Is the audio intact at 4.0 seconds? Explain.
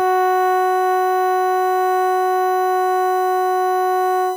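No. At 4.0 seconds, as through the whole music clip, a steady fixed-pitch whine sits at 1 kHz, roughly 25 dB below the music. This is USB whine: current drawn in the bus's 1 ms frames leaks into the audio through power or ground.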